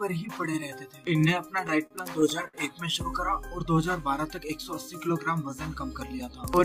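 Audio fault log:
1.67 to 2.55 s, repeated stalls (stutter): packets arrived late, emptying the jitter buffer six times; concealment stretched the last sound, about 140 ms in all, longest gap 58 ms, so playback drags.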